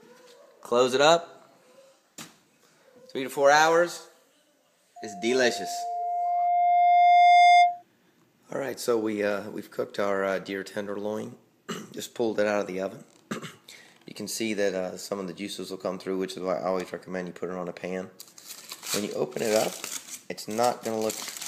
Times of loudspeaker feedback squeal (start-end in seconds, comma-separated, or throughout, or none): 4.96-7.83